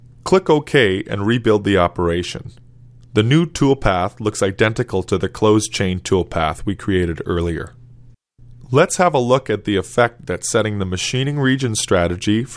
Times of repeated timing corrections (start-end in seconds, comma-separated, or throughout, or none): none